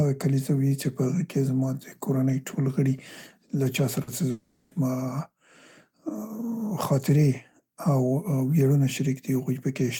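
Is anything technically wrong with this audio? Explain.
Yes, two faults occur close together in the middle of this speech clip.

From 4.03 to 4.10 s, just after "له چا", there is a short concealed packet loss. About 40 ms of the stream did not reach the decoder in time, so the receiver synthesised a stand-in by extending the preceding sound and then crossfading back into the real signal. It is heard as a brief smear or wobble at that point.

From 4.31 to 4.74 s, about 0.4 s of audio is replaced by synthetic continuation of the last sound, heard as a prolonged buzzy or hissy tail rather than speech. There is no silent stretch. Regular speech resumes afterwards with the missing portion simply absent. This pattern is likely a long network dropout, where roughly 400 ms of packets never arrived and the concealment ran for the entire gap instead of handing over to silence.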